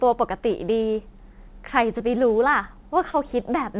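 At 1.98 to 2.02 s and again at 3.12 to 3.16 s there's short concealed packet loss: about 20 ms of the speech never arrived in time, so the receiver patched each gap by carrying the previous sound forward and blending back into the real audio. You hear a quick smear or wobble rather than a dropout. All of it sits inside a narrowband call path with nothing above 4 kHz, which fits G.711 mu-law at 64 kbps.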